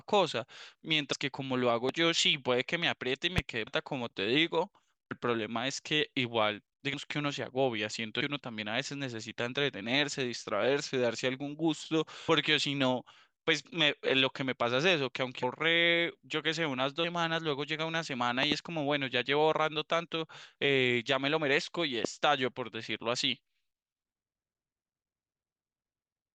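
A speech recording with two kinds of fault. The first is compressed frames skipped, at 1.12, 3.66, 5.10, 6.93, 8.20, 12.28, 15.42 and 17.03 s. At each point the speech jumps forward. Between a hundred and two hundred milliseconds go missing, a handful of frames at a time. That fits 24 ms frames lost from the file or rejected by the decoder. The second is a loud pop, at 1.89–1.91, 3.38–3.41, 18.43–18.54 and 22.05–22.07 s. Each is a sharp pop over the speech, peaking about 15 to 20 dB above it. At 18.43–18.54 s two pops come in quick succession. The speech carries on underneath. The likely cause is a voltage step from a plug, switch, static discharge or driver glitch.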